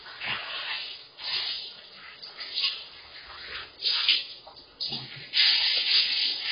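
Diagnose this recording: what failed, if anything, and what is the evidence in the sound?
The codec stage failed: heavy AAC compression across the whole clip. The sound is dull and band-limited, with nothing above 5 kHz, and sustained or noisy parts carry a smeared, warbling texture. The likely cause is AAC-LC encoding at a very low bitrate, which fits roughly 16 kbps. With so few bits, the encoder drops the upper band entirely and coarsely quantises what remains, leaving spectral gaps that swirl from frame to frame.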